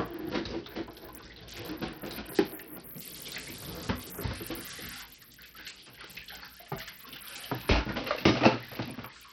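Throughout the clip, the audio carries the marks of heavy Bluetooth SBC compression, likely from a low-bitrate link, which fits a bitrate of around 64 kbps. Nothing is present above 17.1 kHz, and the remaining upper bands are starved of bits, so the treble thins out and flickers rather than holding steady. The coarse quantisation of the wide sub-bands leaves a gritty noise and some aliasing riding on the sound.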